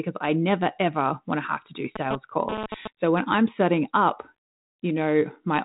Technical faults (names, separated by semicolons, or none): GSM phone buzz